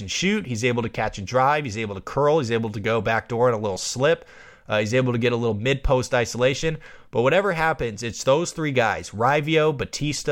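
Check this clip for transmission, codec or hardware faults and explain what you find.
No transmission, codec or hardware faults are audible here.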